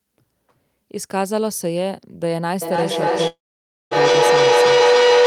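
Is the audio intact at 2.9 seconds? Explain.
No. At 2.9 seconds the speech is caught in a feedback howl that begins at 2.62 s and runs to the end of the clip. The microphone-to-loudspeaker loop gains level on each pass, so the repeats, roughly every 300 ms, grow into a tone near 500 Hz that peaks about 8 dB above the speech. Unlike an acoustic echo, whose repeats fade away, this howl keeps building and narrows to a single pitch.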